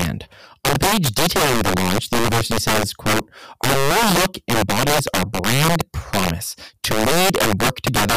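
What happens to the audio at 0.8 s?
At 0.8 s the speech carries integer overflow, as it does throughout the clip: the signal is driven about 11 dB too hot, and the roughly 7 percent of samples past the integer limit wrap to the opposite sign instead of saturating, giving harsh cracks on loud peaks.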